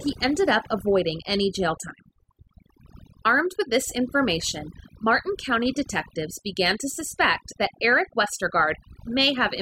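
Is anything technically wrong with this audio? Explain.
Yes. Overdone noise removal runs through the whole speech clip. The reduction is set too strong, so frequency bands near the noise floor get pulled down or cut. Quiet parts of speech vanish with them. The background drops and breaks up into twinkling specks.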